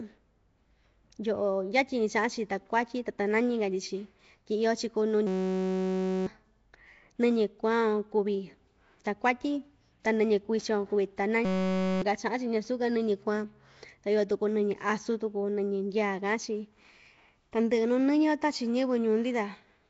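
Throughout this speech recording, the audio appears to have passed through a low-bitrate block codec, likely Nellymoser Asao at a rate that fits 32 kbps. The coder spends a fixed, small bit budget on each short block and fills weak bands with noise rather than detail, so the damage is plainly audible: a rough, hissy halo around the speech and a smeared, underwater quality, with nothing above 7.7 kHz. Twice, the system hang loop occurs: the computer or driver stalled while the sound hardware kept replaying the same ring buffer. That buffer held only 5.33 ms of audio, which fits a 256-sample buffer, so the repeats arrive at 188 Hz and fuse into a steady buzz rather than a stutter. The first runs from 5.27 to 6.27 s, replacing about a second of speech, and the second from 11.45 to 12.02 s, costing about half a second.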